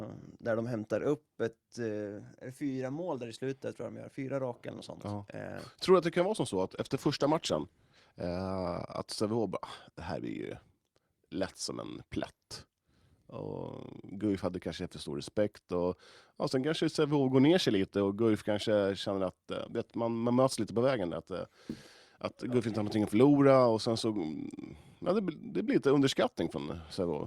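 Right after "kan vara som så", at 6.62 s, the speech shows a call bitrate drop lasting until 9.41 s. The connection's bandwidth estimate fell and the encoder was forced to spend far fewer bits, which fits a fall from roughly 48 kbps to about 15 kbps. The speech turns coarse, watery and dull as high-frequency detail is discarded, worst for about 1.23 s, before the bitrate recovers and clarity returns.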